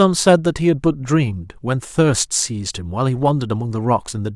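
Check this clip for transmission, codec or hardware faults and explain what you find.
Nothing in the speech points to a transmission, codec or hardware fault.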